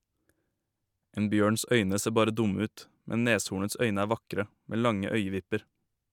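No technical faults can be heard anywhere in the speech. There is nothing to place on a timeline.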